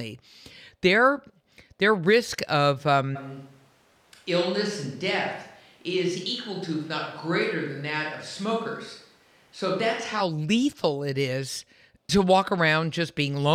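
From 3.17 to 10.2 s the speech abruptly turns hollow, thin and roughly 5 dB quieter with more room noise, likely a switch to a distant microphone. Unlike added reverb, it both starts and ends as a sudden cut.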